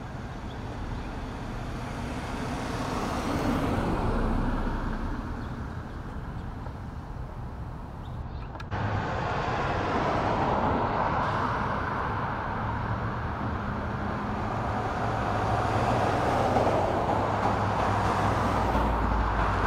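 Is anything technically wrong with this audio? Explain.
Yes. From 8.22 s to 11.23 s there is a channel delay, producing comb filtering. One channel runs late by a tiny amount, about two samples, or roughly 0.05 ms. When the channels are summed to mono, content common to both cancels at evenly spaced frequencies. With so short a delay, the first notch falls high, around 10 kHz. The sound turns dull, losing its top-end air, then recovers after 11.23 s.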